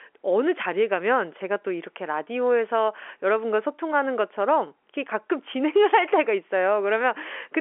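Nothing is technically wrong with this speech clip. It carries the sound of G.711 telephone coding: the band runs roughly from 300 Hz to 3.4 kHz, and nothing is heard above about 3.8 kHz.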